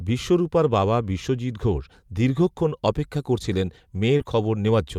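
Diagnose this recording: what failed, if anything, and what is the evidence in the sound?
Network stage, lost packets rebuilt from error correction: nine separate 20 ms frames between 2.33 and 4.69 s, clustered around 3.0 to 4.0 s, turn briefly rough and noisy with no gap. The following packet's low-bitrate copy was played, unlike concealment, which invents sound.

Network stage, short concealed packet loss at 4.17 to 4.21 s: about 20 ms arrived neither in time nor as a redundant copy, so the decoder extended the preceding speech into a brief smear. The next 20 ms came from the error-correction copy, so the hole stays short.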